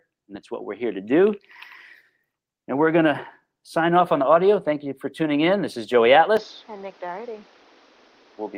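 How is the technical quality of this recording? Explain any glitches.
Two faults affect the recording: a gradual level rise in the first half and an abrupt change of tone near the end.

From 2.66 to 4.59 s there is automatic gain rising. The gain control judged the input too quiet and raised its amplification by about 4 dB over roughly two seconds. The speech and the background noise swell together. On a waveform the envelope widens steadily across that span, and on a spectrogram the noise floor brightens along with the speech.

At 6.37 s, running to the end, the sound suddenly turns duller and quieter, with no gap at the transition. The likely cause is an input switched to a poorer device, such as a different microphone or a headset's call profile. The new path passes nothing above 6.7 kHz, drops the level by around 5 dB and adds its own faint noise about 35 dB below the speech. On a spectrogram the upper band ends in a sharp horizontal edge, and the waveform steps down in amplitude.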